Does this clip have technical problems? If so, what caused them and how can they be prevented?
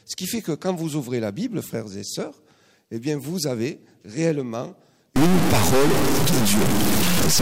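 Yes. From 5.16 s to the end at 7.41 s the sound turns harsh and buzzy, with noise filling the quieter moments. This is likely a stuck bit, where one data bit holds a fixed value and shifts about half the samples by a step near -15 dBFS. Checking converter wiring and data lines prevents this.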